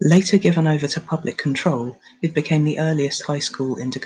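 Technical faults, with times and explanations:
0.11–0.47 s, microphone overload: before "over to public control", peaks exceed the converter ceiling by about 3 dB, likely from excess input gain; the crackle lands only on the loudest syllables.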